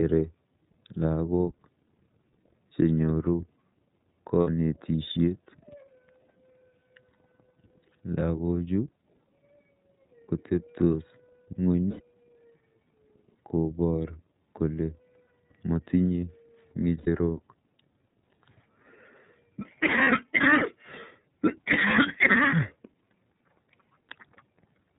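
iLBC codec coding runs through the whole of this speech clip: nothing above 4 kHz survives, and the voice has a plainly audible rough, synthetic edge from each frame's excitation being coded independently, which fits iLBC's 13.33 kbps mode with 30 ms frames. Lost iLBC frames appear at 4.41 to 4.48 s, 11.88 to 12.01 s, 16.98 to 17.08 s and 20.03 to 20.08 s, lasting 60, 120, 90 and 30 ms. In each gap the decoder repeats the last pitch cycle mixed with noise, giving a brief held, buzzy vowel, and the voice is right again almost immediately afterwards.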